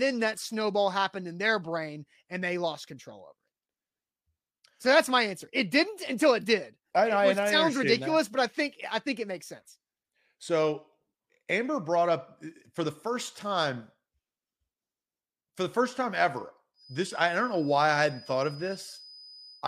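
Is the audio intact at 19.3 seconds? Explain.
No. A feedback whistle runs from 16.73 s to the end at 19.68 s: a thin, steady 5 kHz tone about 25 dB below the speech, swelling and fading slowly in level, likely from a loudspeaker-to-microphone loop held just short of runaway feedback.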